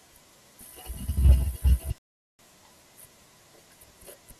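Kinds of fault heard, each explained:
Rebuffering stall: the player used up the audio it had downloaded and had to halt until more data reached it, so playback froze rather than skipping ahead. In this speech clip the sound drops to silence at 1.98 s and stays silent until 2.39 s, a gap of about 0.41 s. It then picks up at exactly the point where it stopped, so nothing is missing, but the clip runs that much longer.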